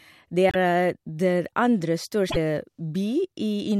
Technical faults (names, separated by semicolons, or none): broken MP3 bit reservoir